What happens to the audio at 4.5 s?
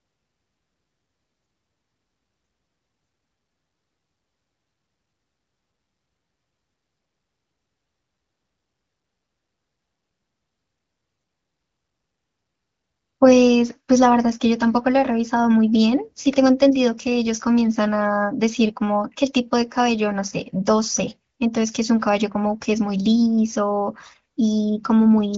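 Nothing goes wrong at 4.5 s: the speech stays intact there, carried cleanly through the AMR wideband (HD Voice) codec with nothing above about 7.2 kHz.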